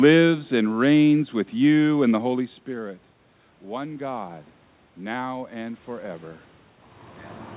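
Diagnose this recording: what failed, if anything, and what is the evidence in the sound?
The failure is in call processing: automatic gain rising. The speech level falls at the microphone after the talker shifts position around 2.5 s, an input drop of about 16 dB. From 3.64 s to 5.89 s the voice and the room noise swell together by about 6 dB. That joint rise over roughly two seconds marks an AGC slowly restoring gain, not a talker coming closer. The band-limit at 4 kHz fits the G.711 mu-law call path.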